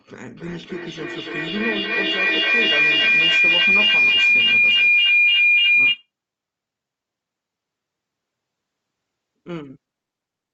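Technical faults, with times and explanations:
0.37–6.1 s: feedback howl. A microphone and loudspeaker on the same call share a room, so each trip round the loop gains level. It narrows to a tone near 2 kHz, pulsing roughly every third of a second, peaking about 13 dB above the speech.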